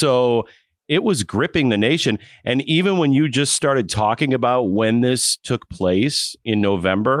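Nothing stood out on listening to the speech in this clip.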